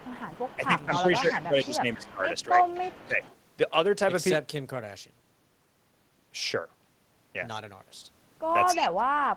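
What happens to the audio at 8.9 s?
Around 8.9 s the speech drops sharply in level, by around 35 dB at its deepest, from 8.74 to 9.19 s, with roughly four tenths of a second affected in all. This is speech suppressed in double talk, and the likely cause is an echo canceller on a loudspeaker-side connection. It could not tell its own talker apart from the far side's sound playing out of the loudspeaker, so it turned both down together.

Just before this, from 8.73 to 8.89 s, a delayed copy of the speech sits about 10 dB below the main voice, trailing it by 258 ms. This is an echo leak. The likely cause is that the loudspeaker side's echo canceller did not fully remove what its microphone picked up from the loudspeaker, so that residue was sent back as a late, quieter repeat.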